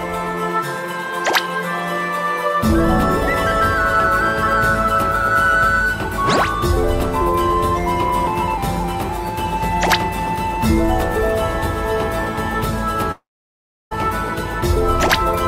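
At 13.11 s the audio smears into a short fading buzz or hiss, then drops to near silence for about 0.69 s before resuming at 13.93 s with roughly 0.8 s of sound missing. This is likely a long network dropout, where the receiver briefly extends the last sound and then gives up.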